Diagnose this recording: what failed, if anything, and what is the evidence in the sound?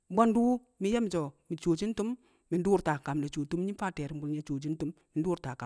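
Nothing failed: no stage in the chain, from wiring through to playback, leaves any audible mark on this speech recording.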